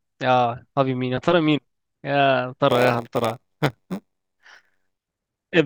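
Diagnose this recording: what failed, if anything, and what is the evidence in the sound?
Block size mismatch (padded), from 2.68 to 5.14 s, in the driver or buffer stage. The speech gains a buzz at about 93.8 Hz and slows to 0.938 times normal speed at roughly normal pitch. Each block comes up short and is zero-filled, which fits a 512-sample read block.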